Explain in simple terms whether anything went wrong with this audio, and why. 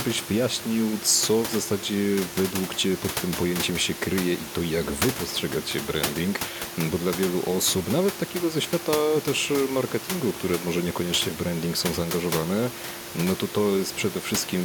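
Nothing stood out on listening to this speech recording; the background noise from the room where it was recorded sits beneath the talking and is part of the recording itself rather than a sign that anything went wrong.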